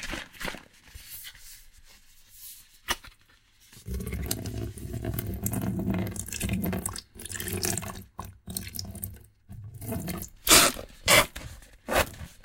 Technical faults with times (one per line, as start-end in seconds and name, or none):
none